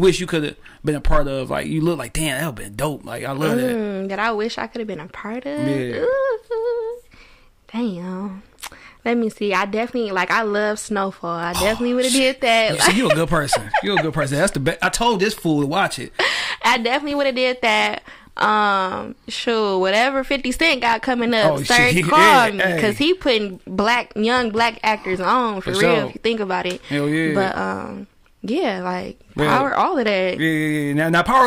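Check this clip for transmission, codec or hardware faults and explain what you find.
Nothing stood out on listening to this clip.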